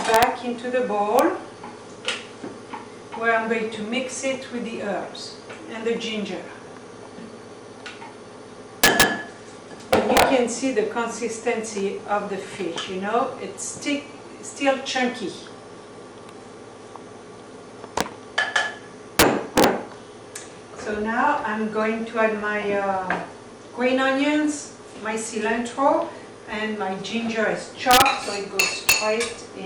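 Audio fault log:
0.14–0.23 s, 1.19 s, 8.84–9.03 s, 9.93–10.22 s, 18.01 s, 19.19–19.64 s, 27.91–28.02 s, 28.60–28.92 s: integer overflow. Peaks exceeded the largest integer, by up to about 6 dB, and wrapped to the opposite sign instead of being limited. Each one flips across the full range, heard as violent cracks much sharper than clipping, worst at 19.19–19.64 s.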